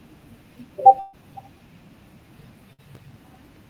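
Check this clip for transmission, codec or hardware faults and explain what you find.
Two faults appear: bursts of packet loss and processor overload crackle.

Burst of packet loss at 0.99–1.15 s and 2.73–2.80 s: about 140 ms and 60 ms of audio went missing. The receiver stretched and faded the last sound across each gap, so you hear the last sound held and fading before the speech jumps ahead.

Processor overload crackle at 2.95–3.66 s: about twenty buffers missed their deadline, and each replay of stale audio left a hard-edged fragment, producing gritty tearing over the speech. This fits buffers of around 1.5 ms.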